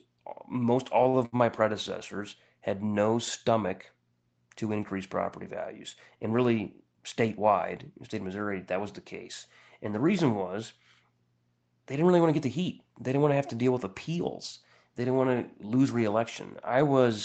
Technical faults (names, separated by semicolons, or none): repeated stalls (stutter); jitter buffer speed-up